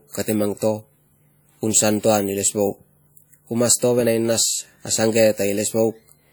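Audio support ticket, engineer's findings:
Ringing, washy smear on speech throughout, plainly audible; hiss swells and fades with the signal. Likely WMA compression: long transform blocks spread quantisation noise over tens of ms, weak spectral lines dropped, consistent with roughly 48 kbps. Unlike MP3-style low-pass damage, band extends to 20.1 kHz; artefact is smearing, not dullness.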